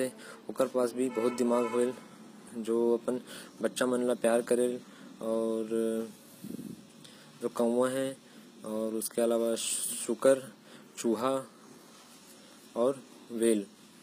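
Speech with HE-AAC compression damage throughout, plainly audible. The treble is synthetic, and s sounds come out gritty and lispy. Nothing reaches above 15.5 kHz. The likely cause is upper bands rebuilt from lower ones, which fits a low bitrate around 24 kbps.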